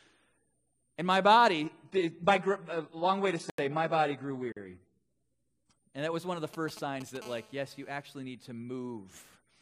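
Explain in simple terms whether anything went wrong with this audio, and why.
Between 1.65 and 5.78 s the sound switches abruptly to an adaptive stream at a lower bitrate. The connection slowed, so the player fetched a much smaller version of the audio. Everything above 11.1 kHz disappears, with no gap at either switch.

Inside that stretch are two blocks of digital silence: an 85 ms hole at 3.50 s and a 43 ms hole at 4.52 s. The player likely didn't deliver audio in time, so the output went straight to zero and back, with no fade. The longer one fits a 4096-sample buffer.

Right after "was one of the", from 6.54 to 7.17 s, there are GSM signalling bursts. A nearby 2G phone was briefly talking to the network, and the audio circuitry picked up its radio pulses as a galloping dit-dit-dit of ticks and short buzzes.

From 7.22 to 8.03 s, ending just before "need to", that phone switches to continuous transmission and produces GSM phone buzz. 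Its radio pulses 217 times a second, so you hear a steady, harsh, raspy buzz underneath, unrelated to the speech.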